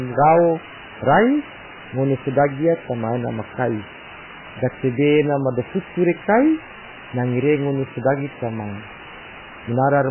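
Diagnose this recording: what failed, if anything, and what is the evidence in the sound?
Sample-format conversion: a constant, even hiss sits only about 10 dB below the signal throughout. This is low bit depth with dither, fitting roughly 4-bit resolution.

Codec stage: heavy watery, swirly smearing throughout, with nothing above 3 kHz. This is likely MP3 compression starved of bits, consistent with a bitrate near 8 kbps.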